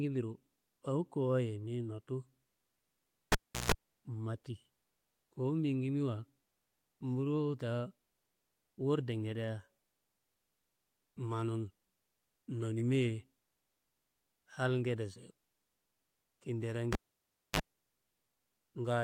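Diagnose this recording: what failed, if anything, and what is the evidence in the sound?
The failure is in the analogue wiring: a cable pulled and plugged in, twice, in this speech recording. At 3.32 s a pop cuts the sound to near silence for about 349 ms, with 147 ms of 60 Hz mains buzz as the tip touches, before reconnection at 3.72 s. At 16.93 s it recurs: 621 ms gap, 37 ms of 50 Hz buzz, return at 17.60 s. The waveform shows spikes bracketing a flat stretch; the spectrogram shows full-band clicks and a short low harmonic stack.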